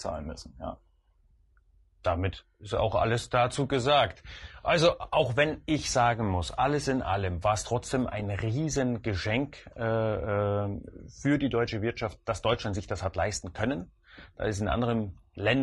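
From start to finish the speech has a rough, grainy texture, with a hiss filling the gaps between the pitch harmonics and a thin, artificial-sounding top end. This is low-delay AAC compression, likely AAC-ELD. Its short frames resolve voice harmonics poorly, and the plainly audible damage points to a bitrate around 32 kbps. On a spectrogram the harmonic stripes look blurred, noise fills the spaces between them, and the upper band appears patchy and flattened.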